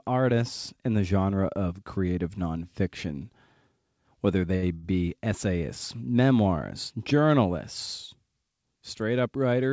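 Speech passing through a G.722 call path with nothing above 8 kHz has two short stalls from a late packet, at 4.56 to 4.65 s and 4.74 to 4.86 s. Each time the jitter buffer ran dry and the receiver held the last sound for about 65 ms and then 85 ms before resuming from the same point. Unlike a dropout, nothing is skipped; the sound just drags briefly with a slight buzz or dip.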